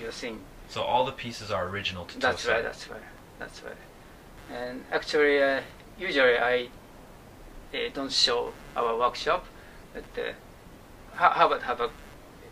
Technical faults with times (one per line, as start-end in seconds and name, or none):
0.00-12.51 computer activity noise